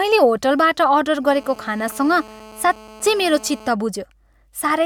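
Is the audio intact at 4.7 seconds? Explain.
Yes, at 4.7 seconds the speech plays through intact, with no audible dropout, click, distortion or other fault at that point.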